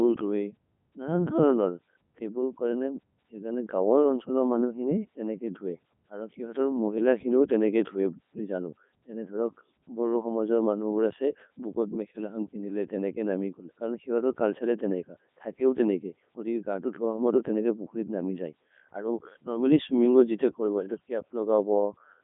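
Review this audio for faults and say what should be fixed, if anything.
Codec 2 vocoder damage runs through the whole speech clip. The decoder rebuilds speech from sine waves driven by pitch, voicing, energy and spectral envelope, so the original waveform is gone. The result is heavily robotic and buzzy, band-limited to roughly 150 Hz to 3.6 kHz, with nothing above 3.8 kHz, which fits the 3.2 kbit/s mode. To prevent it, capture or route the audio through a waveform codec at a higher bitrate instead of a low-rate digital-radio vocoder.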